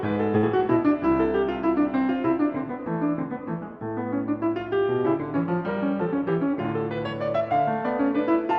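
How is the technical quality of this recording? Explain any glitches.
The music passes through a WebRTC call path with two jitter-buffer glitches. The Opus coding limits the top end to 8 kHz, which fits a moderate call bitrate.

From 0.37 to 0.45 s there is a short stall from a late packet. The jitter buffer ran dry, and the receiver stretched the last sound for 56 ms until the packet arrived. Nothing is lost, but a sustained moment sounds briefly frozen.

From 6.05 to 6.65 s there is a jitter buffer speed-up. Excess buffered audio was trimmed by cutting about 50 ms in pitch-period pieces. The music runs at 107% speed without a pitch change, briefly rushing the tempo.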